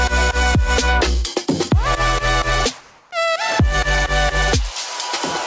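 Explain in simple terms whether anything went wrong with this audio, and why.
Between 2.81 and 3.11 s, the call system likely paused sending sound because it detected silence, so the receiving end filled the gap with comfort noise in place of the background. For those 0.3 seconds, the real room sound becomes a flat, featureless hiss, a touch quieter.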